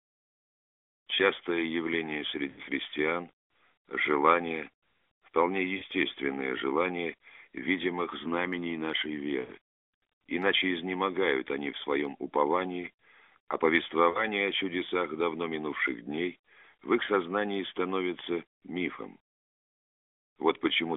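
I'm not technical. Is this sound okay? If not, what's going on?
No. The speech has lost AMR speech frames, a mobile-phone fault. Radio errors spoiled tiny chunks of sound. The phone filled each gap by stretching the last sound and fading it. You hear the sound drawn out and fading toward silence at about 2.50, 5.78, 9.40 and 14.10 seconds.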